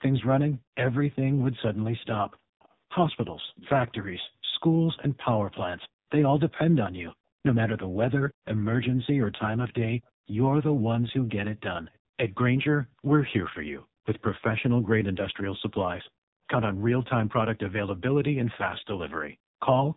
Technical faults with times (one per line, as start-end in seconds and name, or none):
0.00-19.96 AMR narrowband mobile codec
0.58-19.59 background gated by the echo canceller
2.03-5.89 echo leak
10.03-11.98 echo leak
15.70-16.47 echo leak